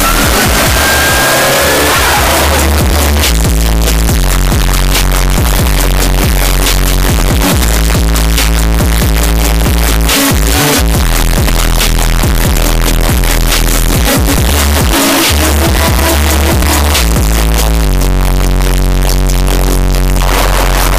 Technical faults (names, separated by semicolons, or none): float read as integer